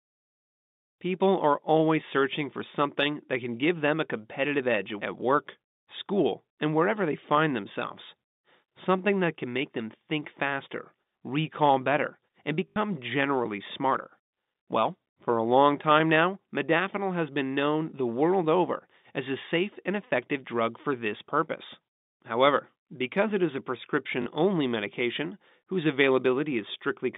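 At 12.68 s the speech breaks into a short robotic stutter lasting 80 ms, and at 24.22 s a shorter one lasts 40 ms. Both are packet loss with the last packet repeated: packets went missing on the line, and the receiver filled each gap by replaying the last good one. The lengths fit 20 ms packets, so each run buzzes or flutters at about 50 Hz over the telephone-band G.711 audio.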